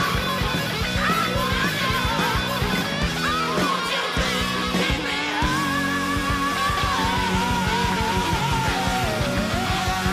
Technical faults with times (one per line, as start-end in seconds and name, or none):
4.72 dropped samples
7.92 dropped samples